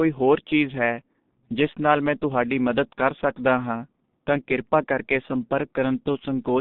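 From start to end, the speech carries heavy G.723.1 codec damage, consistent with its 6.3 kbit/s mode. On a spectrogram, energy stops abruptly at 3.7 kHz and below 150 Hz. Coarse 30 ms frame updates smear consonants and leave the voice muffled and hoarse.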